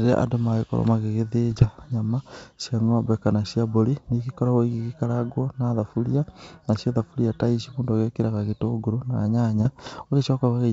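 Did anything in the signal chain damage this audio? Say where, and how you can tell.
Yes, bit errors on an ADPCM link damaged it in transmission: pops and rough bursts with level jumps at 1.50–1.67 s, just before "nyama cia ng'ombe kana", and 9.57–10.06 s, after "mũndũ ekĩraga gĩtũngũrũ na". Each corrupted code throws off the G.722 decoder's step size and predictor, so the roughness rings on briefly instead of leaving the dropouts of packet loss.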